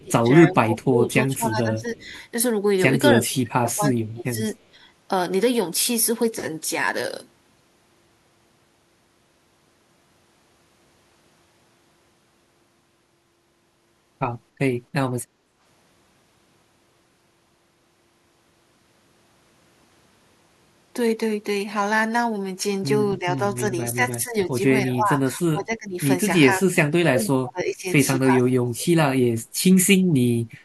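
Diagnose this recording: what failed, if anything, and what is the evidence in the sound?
Call processing, speech suppressed in double talk. The speech dips sharply at 0.0–2.12 s, 3.1–4.4 s and 23.19–28.88 s, likely an echo canceller ducking the local talker along with the loudspeaker echo.

Call processing, echo leak. A very faint copy of the speech arrives about 281 ms late at 1.99–2.21 s, likely residual loudspeaker echo the canceller failed to remove.

Call processing, background gated by the echo canceller. Room sound drops about 7 dB at 15.27–15.59 s while the canceller clamps the microphone, then recovers.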